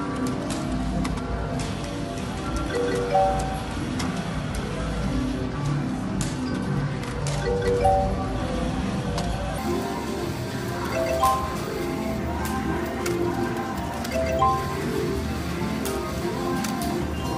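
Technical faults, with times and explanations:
0.00–9.58 s, section at the wrong speed: the opening runs at about 0.73 times its proper rate, so pitch and tempo drop together, roughly five semitones lower and noticeably dragged, likely from this stretch being played back against a mismatched clock before the correct speed resumes.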